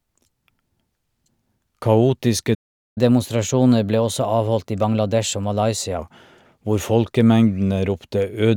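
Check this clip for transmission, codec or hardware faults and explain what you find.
Two playback faults appear, one after the other. At 2.54 s the speech cuts out in a playback stall lasting about 0.42 s, until 2.98 s. The player likely ran out of buffered data or had its output thread blocked, so nothing reached the output and a clear hole opens mid-phrase.

From 2.98 to 5.98 s comes catch-up at higher speed: the player resamples its backlog to run 1.1 times faster, recovering part of the lost time. The speech sounds hurried and raised by about one and a half semitones, then settles back to normal speed and pitch.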